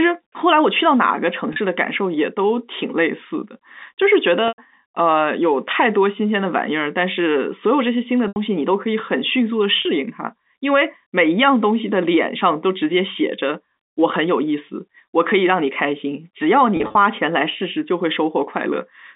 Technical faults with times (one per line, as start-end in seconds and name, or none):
1.53-1.56 packet loss with pitch repetition
4.48-4.58 packet loss with pitch repetition
8.28-8.36 packet loss with pitch repetition
9.82-9.85 packet loss with pitch repetition
16.77-16.95 packet loss with pitch repetition